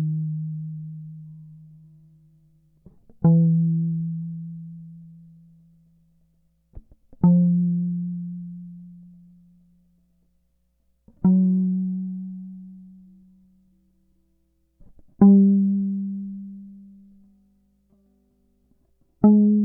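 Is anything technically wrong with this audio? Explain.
No, no technical faults heard.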